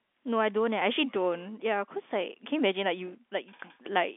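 Nothing stood out on listening to this speech, which comes through the narrow band of an ordinary telephone line.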